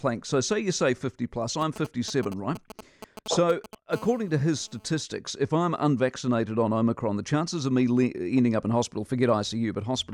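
A speech recording with two kinds of mobile-phone interference. From 1.61 to 3.75 s there are GSM signalling bursts: a galloping dit-dit-dit of brief buzzes at about 217 Hz. A 2G phone nearby is sending short groups of radio bursts while it handshakes with the network. The audio circuitry rectifies them into sound. They sit roughly 15 dB below the speech. From 3.93 to 5.01 s this turns into a steady GSM phone buzz. It is a hard, raspy tone at about 217 Hz with many harmonics, about 24 dB below the speech. Now the phone is in a call and transmits continuously, 217 bursts per second. The circuit demodulates that pulse train into a buzz unrelated to the speech.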